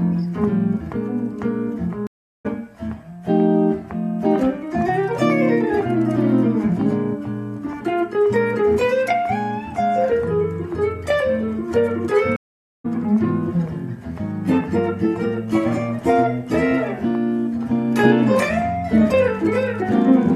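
At 2.07 s the audio drops out for about 0.38 s, then returns at 2.46 s roughly 0.3 s further on than where it left off. This is a stream reconnect: the connection failed, the player went quiet, re-established the link and started a new decoder partway through the stream, so the missed stretch is simply skipped. The same happens at 12.36 s, with a gap of about 0.48 s and resumption at 12.86 s around half a second later in the material.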